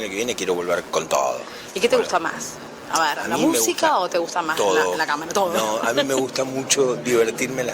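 Computer activity noise runs through the entire clip: a buzzing, chirping layer pulsing at around 150 Hz, sitting roughly 25 dB below the signal. Load changes in the host computer are disturbing the audio circuit's shared ground, so the interference tracks machine activity rather than the sound.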